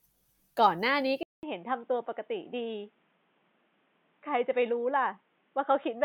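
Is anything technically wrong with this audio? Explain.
Yes. From 1.23 s to the end, after a 200 ms gap, the speech turns boxy and dull, with nothing above 3.8 kHz, a somewhat lower level and a new faint noise floor. This likely means the input switched to a poorer device, such as a headset's call profile. The gap, new background and level change set it apart from a simple low-pass filter.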